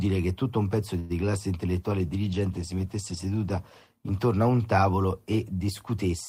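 Just after "che tutto un pezzo", from 0.99 to 1.25 s, there is a call audio freeze. The last bit of speech is stretched into a short buzzy tail that fades rather than dropping to silence. It is likely that delayed packets emptied the jitter buffer and the receiver filled about 0.1 s on its own. When the speech resumes, it carries on exactly where it stopped, with nothing skipped. That is what separates this freeze from lost-packet concealment: the gap is added and the rest of the clip shifts later.

From 1.82 to 3.95 s, ending just before "intorno a un tavolo", there is a call bitrate drop. The encoder falls from 32 kbps to 18 kbps and stays at the lower rate for about 2.1 s. With fewer bits to spend, the speech is coded more coarsely and takes on a rough, watery texture. Unlike the freeze, there is no gap and no timing shift: the speech runs continuously and only its quality suffers.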